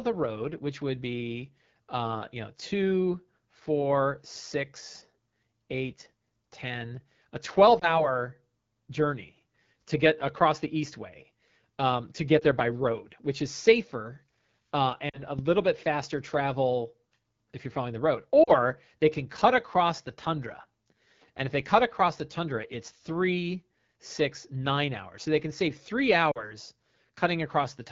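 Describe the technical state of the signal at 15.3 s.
At 15.3 s the signal sits inside a stretch of lost AMR speech frames. The disturbance runs from 15.09 to 15.4 s. About 40 ms of coded audio went missing, which fits two consecutive 20 ms frames failing their checksum on the radio link. The decoder covered the gap by repeating its last good pitch and vocal tract settings at falling gain. The result is a short dip that sinks toward near silence. Wideband fades fast, so the dip is brief. The sound returns thin and rough for a moment after.

Underneath, the whole clip carries the AMR wideband (HD Voice) codec at a low rate. The roughness points to about 8.85 kbit/s, one of the two lowest modes. The pulse-driven model struggles to rebuild the voice there. The speech sounds raspy and gritty. The top band above 6.4 kHz is filled with shaped noise rather than real detail. That damage is plainly audible around 15.3 s as well.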